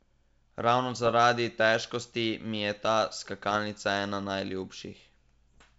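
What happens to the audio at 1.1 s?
Between 1.04 and 1.14 s, bit errors on the ADPCM link corrupt a small fraction of the data. Each flipped bit knocks the decoder's step size and prediction off track for milliseconds, so the speech breaks into pops and rough bursts with brief level jumps.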